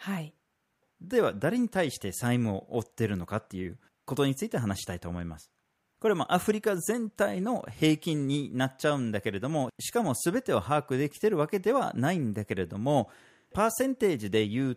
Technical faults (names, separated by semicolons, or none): none